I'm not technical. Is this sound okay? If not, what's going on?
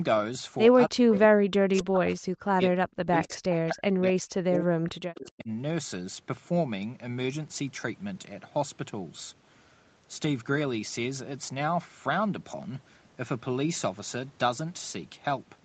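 No. From about 0.88 to 5.5 seconds the voice keeps sinking, at its worst almost to silence, and comes back in pieces, adding up to roughly four seconds lost. This is most likely speech suppressed in double talk: both ends seem to have talked at once, and the echo-cancelling system couldn't tell this voice from the other side's sound coming out of a loudspeaker, so it turned everything down. Unlike a connection dropout, the gaps follow the overlap of the two talkers and aren't random.

There are also two short moments, from 1.13 to 1.19 seconds and from 3.24 to 3.57 seconds, where a faint second copy of the voice trails about a quarter of a second (256 ms) behind the original. This is likely an echo leak: one side was probably on a loudspeaker, and its echo canceller let part of that sound slip back. It differs from room reverberation because it is a distinct, delayed repeat that shows up only in these brief scraps.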